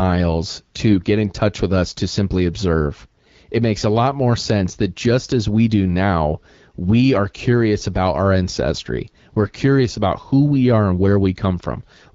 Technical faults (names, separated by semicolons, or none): AMR bit errors